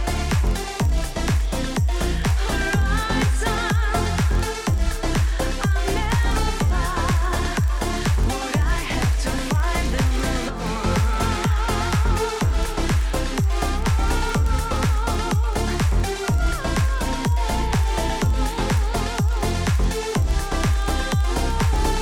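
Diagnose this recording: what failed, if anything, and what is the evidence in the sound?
The fault is a filter restarted on every block in the block-based processing stage. Throughout the clip a 23.4 Hz buzz rises and falls with signal level, which fits a 2048-sample block. The filter starts each block from silence, so a small transient marks every boundary. A spectrogram shows evenly spaced vertical lines, and the waveform shows a regular tick train.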